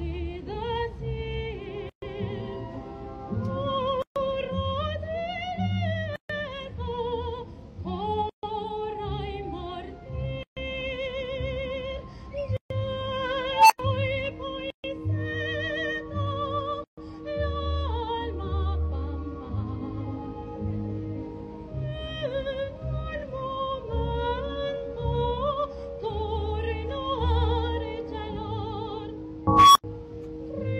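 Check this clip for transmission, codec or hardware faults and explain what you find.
Two kinds of fault are present: regular dropouts at joins of encoded pieces, and two bursts from an unstable filter.

Gap at a join of encoded pieces, at 1.89, 4.02, 6.16, 8.29, 10.43, 12.57, 14.70 and 16.84 s: the sound stops abruptly for about 0.13 to 0.14 s, every 2 s, then resumes where it left off. Separately encoded 2 s segments were joined untrimmed, keeping each encoder's start delay and end padding as silence.

Unstable filter, at 13.52 s and 29.47 s: a tone around 1 kHz swells over 0.18 s and then 0.28 s into a loud squeal, then cuts to silence for roughly 95 ms and 85 ms. A recursive filter with bad coefficients grew without bound, clipped, overflowed and reset.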